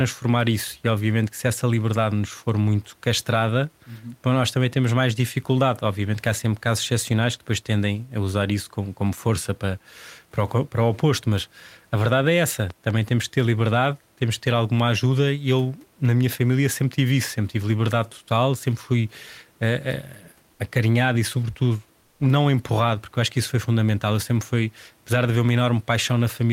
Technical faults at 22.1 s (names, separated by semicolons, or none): comfort noise in place of the background